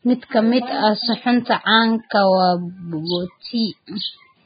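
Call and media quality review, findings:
Whole clip: hissy, grainy speech, nothing above 4.9 kHz, treble detail replaced by noise-like texture. Likely Vorbis compression at heavy setting, sound fits roughly 15 kbps; coarse residue quantisation over spectral floor, low cut-off.

Pre-echo at 2.10 s: brief hiss, about 16 ms, ahead of a sharp onset, attack softened. Same transform codec; quantisation noise spread across whole block, leaking into quiet gap before transient.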